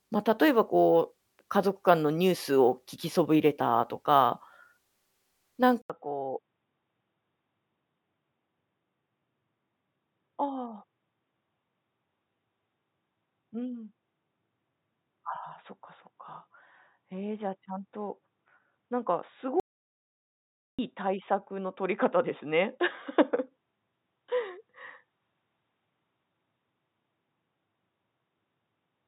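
At 5.82 s the speech goes silent for about 80 ms and comes back duller and boxier, staying that way to the end. This is an input switched to a poorer device, likely a change to another microphone or a headset call profile. Nothing survives above 3.8 kHz, so sibilance and air vanish. The level drops by roughly 5 dB, and a new faint noise floor sits around 50 dB below the speech. On a spectrogram the energy stops at a flat ceiling near 3.8 kHz after a thin blank strip. The waveform shows a brief flat gap and a smaller envelope afterwards.

From 19.60 to 20.79 s there is an audio dropout to silence lasting about 1.19 s. The speech stops abruptly and returns just as abruptly, and the room tone and background noise vanish along with it, most likely because the input link was lost while silence kept being written. The waveform is a flat line across the gap. The spectrogram shows a completely empty vertical band, with even the faint noise floor missing, and sharp edges where the sound cuts out and comes back.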